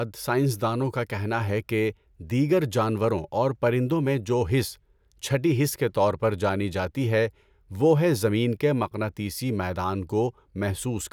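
No technical faults are audible.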